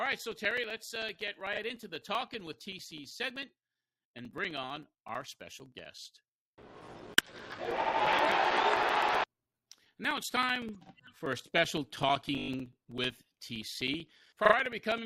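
From 0.06 s to 14.98 s, periodic USB or driver dropouts punch a gap of roughly 4 ms of silence into the sound every 64 ms, around two hundred in all. A blocked bus or driver causes this, heard as steady ticking. The waveform shows flat notches, and the spectrogram shows evenly spaced thin vertical gaps.

Repeated frames appear at 12.37 to 12.50 s, where a 20 ms block plays six extra times and adds 120 ms, and at 14.45 to 14.53 s, where a 40 ms block plays twice more and adds 80 ms. Each produces a stutter, with identical repeated slices visible on the spectrogram.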